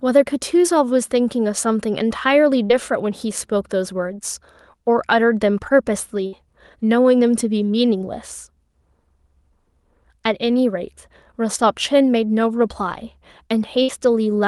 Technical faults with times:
2.65-2.81 short concealed packet loss
6.27-6.34 burst of packet loss
13.82-13.90 burst of packet loss

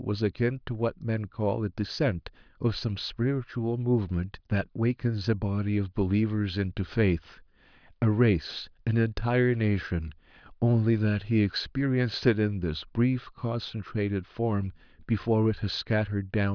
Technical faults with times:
none

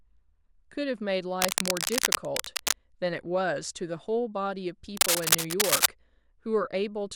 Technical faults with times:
1.41-2.75 cable scratch noise
4.97-5.86 cable scratch noise

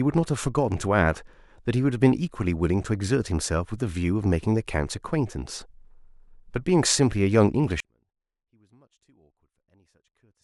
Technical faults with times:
7.80-10.44 audio dropout to a faint residue

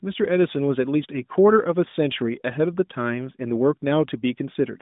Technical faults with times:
none

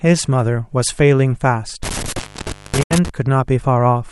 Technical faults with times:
1.83-3.09 intermittent contact
2.83-2.91 digital broadcast dropout

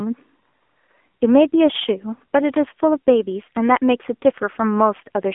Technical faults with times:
0.00-5.34 AMR narrowband mobile codec

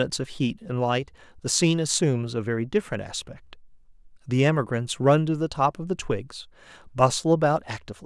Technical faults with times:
none

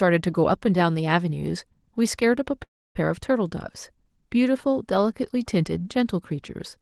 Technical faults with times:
2.63-2.97 call audio freeze

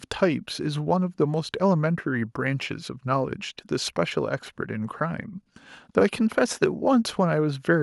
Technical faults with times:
none

